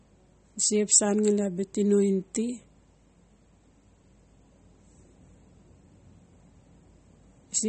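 MP3 compression damage runs through the whole recording, plainly audible from start to finish. Nothing is left above about 8.4 kHz, so the speech sounds dull and the s sounds lose their edge. The likely cause is an encoder starved of bits, which fits a bitrate around 32 kbps. It drops the treble at a fixed point and zeroes the weaker frequency lines, which flicker on and off from frame to frame. That gives a watery, swirling texture, and consonant attacks smear.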